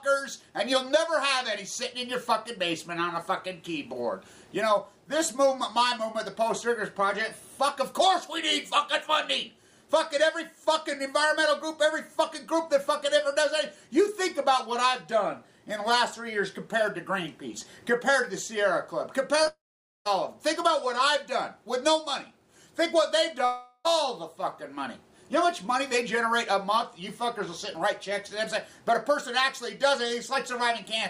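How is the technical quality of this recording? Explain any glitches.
The recording has three glitches in the 19 to 24 second range, all of them from audio going missing in transit.

At 19.43 to 19.47 s there's a short concealed packet loss. About 20 ms of audio didn't reach the decoder in time, so the receiver patched the gap by extending the sound just before it. You hear it as a quick smear or wobble.

Right after, from 19.47 to 20.07 s, there's what's likely a long network dropout. Roughly 0.58 s is lost. The receiver carries the last sound on briefly as a fading buzz or hiss, and then about 0.48 s of it is just silence. A second one hits at 23.45 to 23.87 s, where about 0.4 s is lost. That gap is almost entirely that fading filler, with only around 30 ms of silence at the end. In both cases the audio picks up again without the part that went missing.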